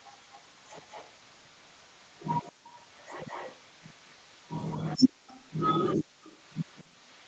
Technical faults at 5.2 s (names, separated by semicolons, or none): background gated by the echo canceller; echo leak